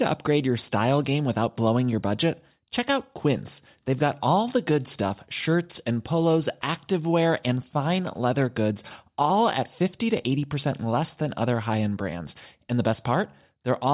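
Nothing goes wrong anywhere in this recording, so there's no fault to walk through at any point along the way.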